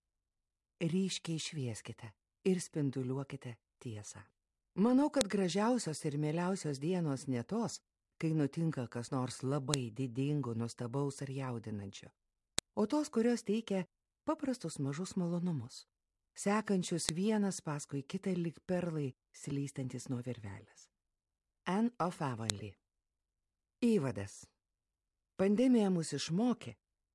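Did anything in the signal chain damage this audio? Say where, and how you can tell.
Yes. A file header played as audio: sharp, loud clicks at 5.21, 9.74, 12.59, 17.09 and 22.50 s, independent of the surrounding sound. This points to the storage or playback stage, where WAV segments were concatenated with headers intact, so header bytes decode as samples.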